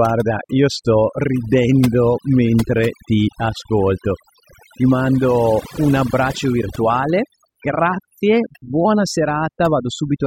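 Throughout, overdone noise removal gates individual frequency bands near the noise estimate, leaving twinkling specks over near-silence, unlike codec smearing, which follows the signal itself.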